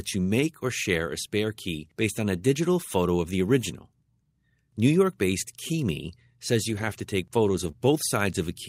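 Around 2.01 to 2.03 s, a brief patch of the speech turns rough and noisy but never drops out. This is a lost packet rebuilt from error correction: a 20 ms stretch went missing and the decoder played the low-bitrate backup copy carried in the following packet. The same coarser, grainier texture returns for longer at 6.69 to 6.99 s, which fits eight separate 20 ms packets rebuilt over 160 ms, and again at 7.55 to 7.69 s, which suggests four packets and 80 ms.

Right after that, at about 7.71 to 7.75 s, there is a short smear or wobble rather than a gap. This is a short concealed packet loss: 20 ms of audio never arrived in time. The receiver extended the preceding sound to fill about 13 ms of the hole, then crossfaded back into the real signal.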